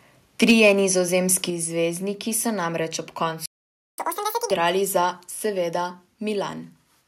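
From 0.42 to 0.69 s the speech peaks are flat-topped and crackly: microphone overload, likely from input gain driving the converter about 5 dB past full scale, clipping a few percent of samples.

At 0.51 s and again at 1.5 s, just before "zvezdniki so namreč ob", the microphone volume steps down by about 3 dB and then about 4 dB, likely automatic gain control reacting to the clipping.

After "zvezdniki so namreč ob", a playback stall silences the output from 3.46 to 3.98 s for about 525 ms, likely the player running short of buffered data.

From 3.98 to 4.51 s the player catches up at higher speed, running at 2.0 times normal rate. Pitch rises by around ten semitones until normal playback resumes.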